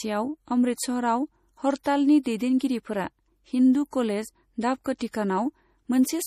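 Throughout, the speech sounds watery and swirly, likely from MP3 compression at a bitrate near 40 kbps; a spectrogram shows flickering high-frequency patches and nothing above 15.2 kHz. From 4.98 to 5.01 s, pre-echo puts a 22 ms hiss ahead of an attack, visible on the waveform as low-level noise appearing before the transient.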